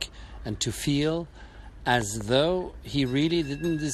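A speech recording with a loud pop: at about 2.01 s a sharp double pop cuts in on top of the talking, two closely spaced thumps lasting until about 2.23 s and peaking a little louder than the speech itself, while the speech carries on underneath. The likely cause is a sudden voltage step or pulse, from a plug, switch, static discharge or driver glitch, entering the signal chain, with the following circuitry shaping it into this brief double hit.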